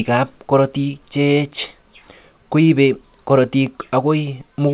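Nothing stood out on listening to this speech, which comes through a call path using G.711 mu-law at 64 kbps, so nothing is heard above 4 kHz.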